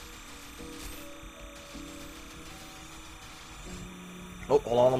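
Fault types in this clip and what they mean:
Timecode bleed: Linear timecode from an adjacent track or cable has leaked into the audio path, so a square wave flipping between roughly 1 and 2 kHz sits about 20 dB below the sound, chirping at a steady 30-frame rhythm throughout.
Adaptive stream at a lower bitrate: The stream switched to a cheaper encoding mid-playback, so from 2.34 s to the end codec artefacts rise, without a gap. The shift fits Opus dropping from 64 to 16 kbit/s.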